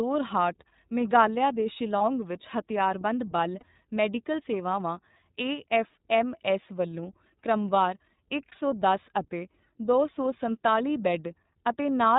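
Throughout, the speech carries iLBC codec damage: nothing reaches above 4 kHz, so a spectrogram shows a hard ceiling there, and the voice sounds plainly rough and synthetic, consistent with the 30 ms frame mode at about 13.3 kbps, each frame coded independently.

Lost iLBC frames occur at 1.98 to 2.01 s, 3.59 to 3.63 s and 8.49 to 8.53 s, each about 30 ms. The decoder fills each gap by repeating the last pitch cycle with added noise, heard as a brief buzzy, held vowel. On a spectrogram this appears as smeared, repeated harmonics, and on the waveform as copied periodic cycles, with the voice right again almost at once.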